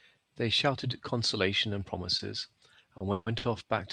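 Late packets emptied the jitter buffer three times, causing a short stall from a late packet at 2.17, 2.97 and 3.38 s. Each holds the sound for 20, 30 and 50 ms, with a faint buzz, and nothing is lost. Between them, at 3.12 to 3.29 s, a call audio freeze, likely from packets held up in transit, stretches the sound into a fading buzz for about 140 ms, never reaching silence, before it resumes where it stopped.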